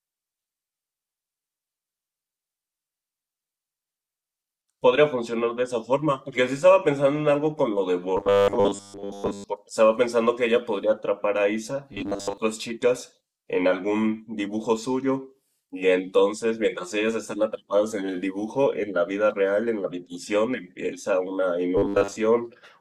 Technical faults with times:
8.17-9.44 robotic sound from repeated short buffers
11.93-12.38 robotic sound from repeated short buffers
21.77-22.16 robotic sound from repeated short buffers

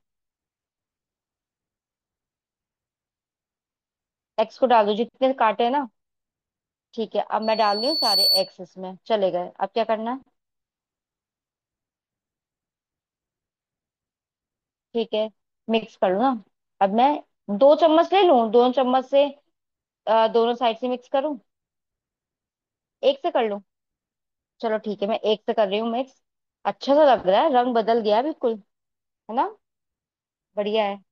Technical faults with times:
7.42-8.56 loudspeaker feedback squeal

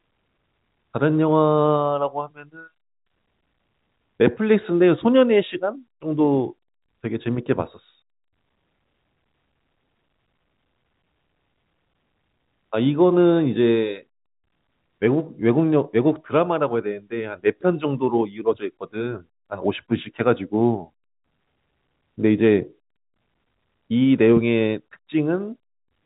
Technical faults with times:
none

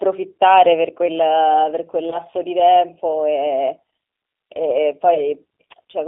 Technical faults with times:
0.00-6.07 G.729 codec
2.10-2.18 VoIP packet loss concealed by the speech codec
5.14-5.21 VoIP packet loss concealed by the speech codec

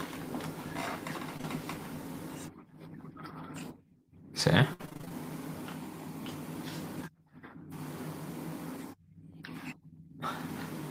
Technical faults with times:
1.37-1.45 short concealed packet loss
4.73-5.12 repeated packet loss (robotic sound)

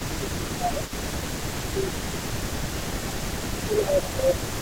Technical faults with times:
0.00-4.61 echo leak
0.07-0.90 speech suppressed in double talk
1.39-3.29 speech suppressed in double talk
3.64-4.37 speech suppressed in double talk

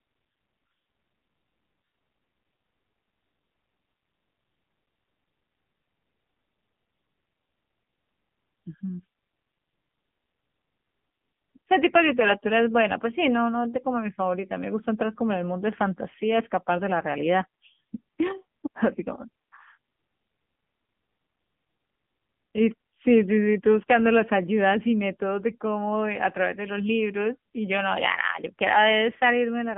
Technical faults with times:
0.00-29.77 AMR narrowband mobile codec

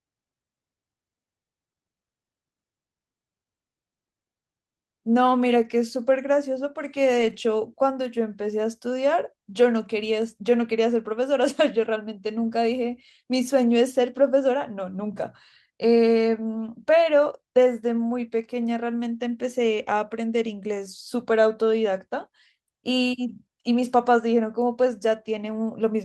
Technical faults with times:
7.17-7.35 lost packet rebuilt from error correction

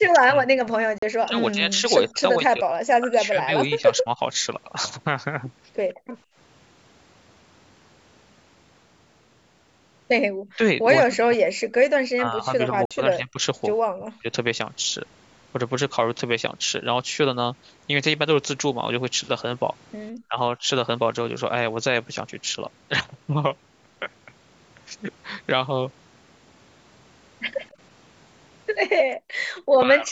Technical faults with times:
0.00-4.20 speech suppressed in double talk
0.98-1.03 Bluetooth dropout
5.94-6.36 background gated by the echo canceller
10.56-14.27 speech suppressed in double talk
12.85-12.91 Bluetooth dropout
20.28-20.68 speech suppressed in double talk
27.57-27.67 echo leak
28.96-29.54 background gated by the echo canceller
29.82-30.11 speech suppressed in double talk

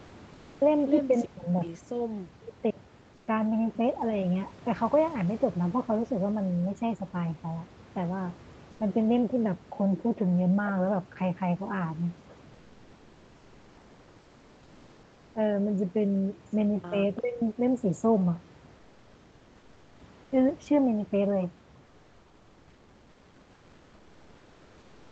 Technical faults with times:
1.23-1.63 speech suppressed in double talk
2.45-2.78 speech suppressed in double talk
3.15-3.27 comfort noise in place of the background
8.71-8.79 comfort noise in place of the background
17.16-17.21 echo leak
17.19-17.42 speech suppressed in double talk
18.75-20.31 comfort noise in place of the background
21.87-25.11 comfort noise in place of the background

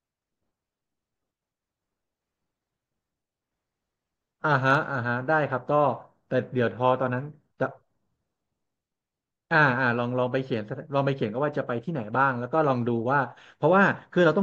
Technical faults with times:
none

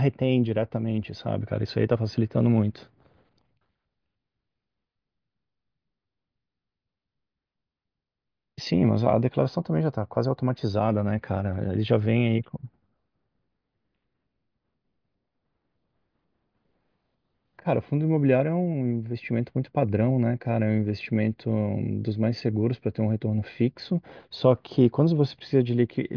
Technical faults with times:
none

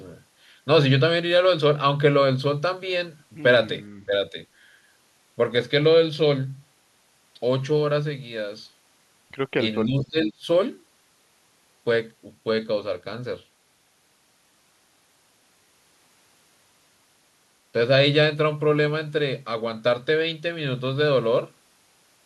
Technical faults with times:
4.06-4.13 speech suppressed in double talk
9.81-10.47 speech suppressed in double talk

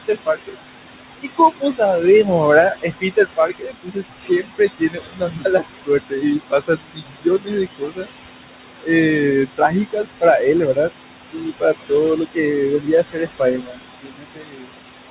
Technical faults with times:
0.00-15.11 noise suppressor artifacts
0.08-0.55 speech cut by the noise suppressor
1.21-1.81 speech cut by the noise suppressor
2.70-8.07 speech cut by the noise suppressor
9.57-10.42 speech cut by the noise suppressor
11.32-11.92 speech cut by the noise suppressor
12.79-14.70 speech cut by the noise suppressor

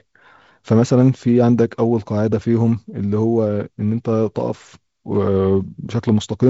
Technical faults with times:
none

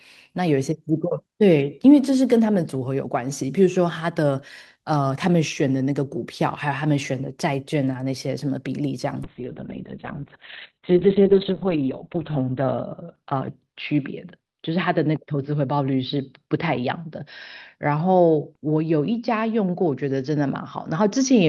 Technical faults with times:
9.25-21.48 call bitrate drop

